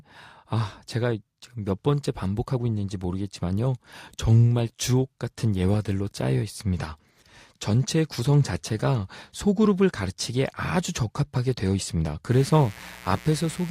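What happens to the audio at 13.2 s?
A switching source such as a dimmer or rectifier, or a missing shield, is letting sharp spikes into the speech path twice per 60 Hz mains cycle. The result is mains buzz running from 12.32 s to the end of the clip, so 13.2 s falls inside it. Harmonics of 60 Hz stack up into the kilohertz range, giving a steady, raspy buzz that sits roughly 20 dB below the speech.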